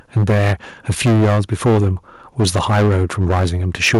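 From 0.16 to 0.53 s the speech takes on a harsh, crackling, flattened edge on its loudest moments. That is microphone overload, likely caused by an input volume set so high that the peaks run about 9 dB past the converter's ceiling. Nearly a third of the samples in that stretch are sheared flat at the limit, and the squared-off waveform is what produces the gritty buzz.

At 0.18 s, inside that first distorted stretch, the speech and background together drop in level in a single small step of about 2 dB. This is the microphone volume stepped down, likely by call software that detected the clipping and lowered the device's input gain at once.

The reduction is too small to cure the problem. The same crackle returns from 0.89 to 1.88 s, about 11 dB over, again with nearly a third of samples clipped. It comes back from 2.39 to 3.46 s, about 10 dB over, and from 3.74 s to the end, about 9 dB over. 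In these last two stretches roughly a sixth of samples are flattened.

A second step down of about 2 dB comes at 3.95 s, once more just after distorted peaks, and the clipping continues after it.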